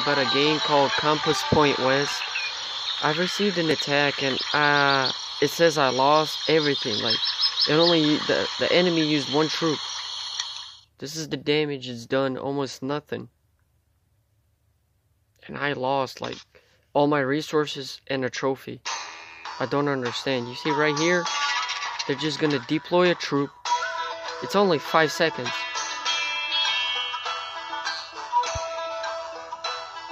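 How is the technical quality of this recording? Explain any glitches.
No glitches turn up anywhere in this recording, so there's nothing here that needs explaining.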